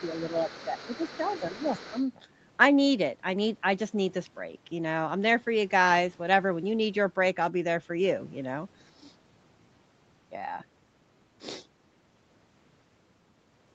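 From 0 to 2.04 s, a faint second voice sits under the speech, about 20 dB below it. This is other side's voice leaking through. The far end is playing on a loudspeaker, and the echo canceller likely left part of it in the microphone signal.

Over the same stretch, the speech itself dips briefly at 0.3, 0.65, 1.18, 1.51 and 1.9 s. Each dip is short, well under a fifth of a second. Most drop about 5 dB, and the one at 0.65 s drops about 10 dB. This is speech suppressed in double talk. With both sides talking, the canceller likely mistook the talker for echo and turned everything down.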